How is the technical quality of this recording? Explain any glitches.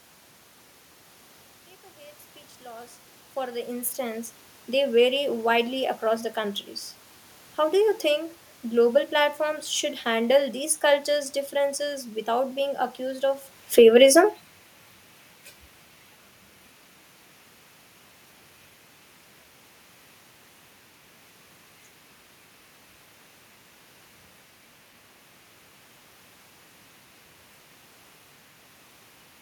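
The main glitch is a drop in level from automatic gain falling, between 13.63 and 13.99 s. The gain control judged the input too loud, or its background noise too strong, and pulled its gain down by about 4 dB over those few tenths of a second. The speech and the room noise behind it sink together. That shared drop separates it from the talker moving around 13.5 s, which changes only the voice level and leaves the background steady.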